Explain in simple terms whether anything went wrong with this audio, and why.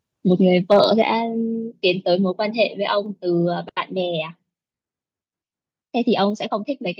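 Yes, two things went wrong. From 0.71 to 0.8 s the loudest bit of speech turns harsh and crackly, likely microphone overload, with the peaks flattened against the input limit. At 1.02 s everything abruptly gets quieter, likely the microphone volume stepped down by the call software reacting to that distorted peak.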